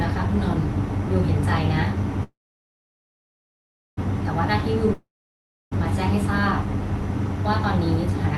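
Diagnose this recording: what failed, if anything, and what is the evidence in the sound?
The first one's a call audio freeze, sitting in the network and jitter buffer stage. From 2.23 s to 3.99 s the sound stalls. The last bit gets stretched into a fading buzz, then roughly 1.6 s of near silence. When it picks up again, nothing's skipped; it just resumes where it stopped, now running about 1.7 s late. That's the signature of packets likely stuck in transit while the buffer drained and the receiver filled the wait.

The second is a long network dropout, same network stage but a different outcome. At 4.94 s the audio smears into a decaying hiss, goes quiet for about 0.66 s, and comes back at 5.73 s further along, with roughly 0.78 s simply gone. Unlike the freeze, the timeline doesn't shift; the lost chunk likely never reached the receiver, so concealment covered the hole and playback jumped ahead, all heard through the call's band-limited top end near 12 kHz.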